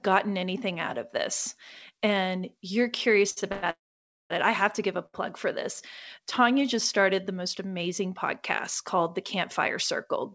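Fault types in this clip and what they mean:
Short stall from a late packet: a packet arrived after its playout time, so the jitter buffer briefly ran dry and the receiver held the last bit of sound until the packet turned up, then carried on from the same point. Nothing is lost, but a sound is drawn out with a slight buzz or dip, at 3.30 to 3.38 s (about 66 ms stretched) and again at 5.06 to 5.15 s (about 72 ms), each pushing everything after it slightly later.
Call audio freeze: the sound points to packets held up in transit, likely a network stall, leaving the jitter buffer empty. The receiver first extends the last sound as a fading buzz, then, if the wait goes on, drops to silence before resuming exactly where it stopped. At 3.52 to 3.65 s about 106 ms is filled with that drawn-out buzz or hiss. At 3.71 to 4.32 s the gap is about 594 ms, mostly dead silence for around 530 ms. The speech after each gap arrives later but with nothing missing.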